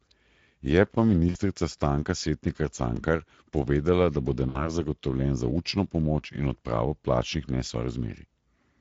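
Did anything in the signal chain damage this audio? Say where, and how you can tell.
Yes. At the codec stage, Speex at 16.8 kbps leaves the whole clip audibly hoarse and noisy, because the excitation is starved of bits throughout.

On the network side, there's VoIP packet loss concealed by the speech codec at 1.29–1.38 s and at 4.49–4.66 s, right after "povedala da bo". Each gap sounds like about 60 ms of fading extrapolation, which fits three lost 20 ms frames.

At the buffer stage, overlapping chunks cause a stutter at 2.97 s, just before "povedala da bo", and at 4.99 s, just before "za učno pomoč in". About 23 ms replays at each 2-second chunk join.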